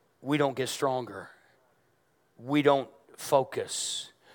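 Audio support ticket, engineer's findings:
Gave the speech clip a few listens and found nothing to flag, so no faults to log on this one.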